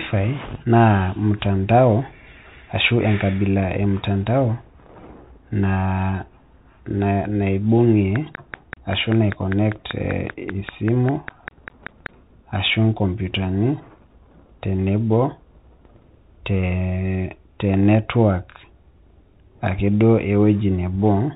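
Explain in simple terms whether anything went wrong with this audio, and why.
Two things went wrong here. The whole clip has been squeezed through a Bluetooth CVSD headset codec, the basic one headsets fall back to for calls. It describes the sound one tiny up-or-down step at a time and throws away everything above 4 kHz, so the speech comes out muffled and boxy. You can plainly hear it: s sounds turn scratchy, louder bright moments smear and distort, and a grainy hiss sits underneath throughout.

Then, from about 8.16 s to 12.07 s, there's a train of clicks: roughly twenty sharp ticks, evenly spaced at about five per second, and they jump out well above the speech. Each click sounds much the same, and they keep ticking steadily through that stretch rather than following anything in the speech. A regular run like that is most likely interference from nearby equipment or a faulty connection or power supply pushing little pulses into the signal.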